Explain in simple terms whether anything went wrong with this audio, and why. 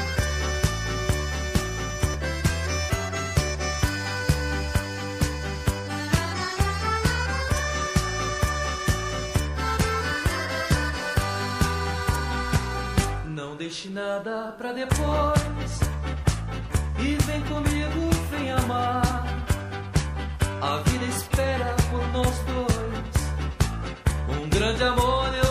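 Nothing went wrong here; the audio sounds just as it should all the way along, with no glitches or damage to point to.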